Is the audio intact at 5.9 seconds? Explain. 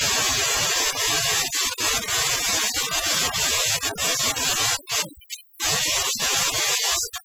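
No. At 5.9 s the speech carries overdone noise removal, present throughout. Aggressive suppression cuts quiet bands near the noise floor, leaving twinkling specks.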